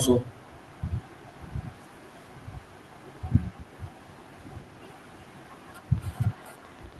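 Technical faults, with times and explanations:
1.76–2.06 s and 3.72–3.76 s, echo leak: a faint delayed copy of the speech trails the original by 375 ms, very quiet, around 35 and 30 dB below it. This is likely the far end's echo canceller letting some loudspeaker pickup slip back into the call.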